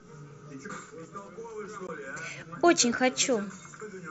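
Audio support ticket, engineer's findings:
Dropout at 1.87 s: a 15 ms hole in the speech with abrupt edges. This is unconcealed Bluetooth headset packet loss on the headset-to-phone link. The gap length fits two lost voice packets replaced by silence or an idle pattern, with no concealment. The wideband mSBC path passes speech up to 8 kHz with light graininess.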